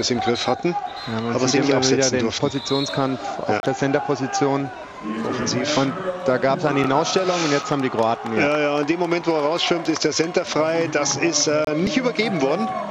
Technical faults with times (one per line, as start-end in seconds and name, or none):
3.60-3.63 gap between stream segments
7.62 gap between stream segments
11.65-11.67 gap between stream segments